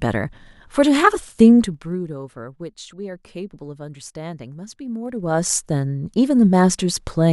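Speech with zipper noise from 1.58 to 1.97 s, as the level drops roughly 15 dB in 1 dB steps at about 40 per second, and from 5.04 to 5.60 s, rising back similarly at about 30 per second; each unsmoothed gain step clicks.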